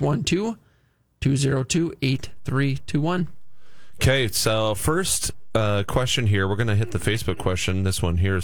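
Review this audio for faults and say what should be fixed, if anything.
A DC step at 2.15 s shifts the waveform's zero line by about -32 dBFS, heard as a low thump, and the offset holds to the end. Fix it with a high-pass filter or DC-blocking stage after the converter, and avoid switching offset inputs in mid-recording.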